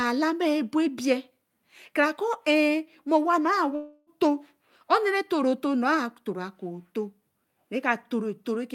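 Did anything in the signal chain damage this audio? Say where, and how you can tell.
Yes. From 3.75 s to 4.10 s the speech stops and is replaced by a buzzy, hissy continuation of the last sound that fades out over roughly 0.3 s, with no true silence. The speech then resumes with about 320 ms of content gone. This points to the network stage, likely a long network dropout that the receiver's concealment papered over. On a spectrogram the harmonics smear into flat, decaying bands; the waveform shows a smooth envelope fade with no onsets.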